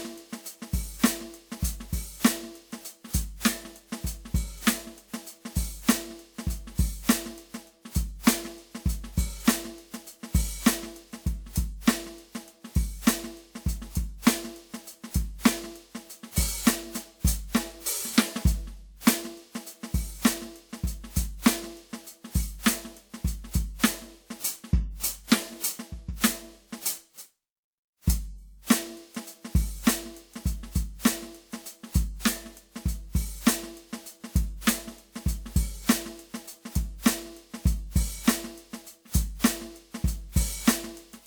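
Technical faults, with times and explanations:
Throughout, generation loss: the music sounds swirly, smeared and hollow, with blurred attacks, worse than a single pass at a rate that fits 128 kbit/s WMA would leave, though content extends to about 20.1 kHz. That mix of full bandwidth with stacked artefacts is what sets it apart from one low-bitrate encode. It is likely from around seven successive WMA decode and re-encode passes, each requantising on a shifted frame grid so noise accumulates.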